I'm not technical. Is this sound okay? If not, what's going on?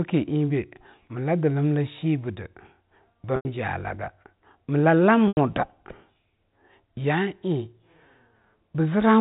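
No. There are two short gaps from packet loss with pitch repetition, at 3.36 and 5.28 seconds, each about 90 ms long. Bits of the speech never arrived. The phone briefly repeated the last bit of pitch, faded it toward silence, then blended the speech back in. The G.711 telephone coding behind it sounds as a phone line should.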